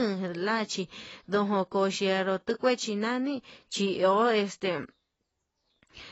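AAC compression damage runs through the whole clip: nothing survives above about 7.9 kHz, so the speech sounds dull, and the codec damage is plainly audible as a smeared, warbling texture on sustained sounds and a fizzy edge on sibilants. This is likely low-bitrate AAC-LC encoding, which fits a rate around 24 kbps. Short of bits, the encoder lowers its cut-off and coarsely quantises the remaining frequency bands.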